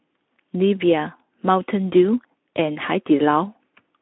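There are no technical faults to describe in time order in this speech clip.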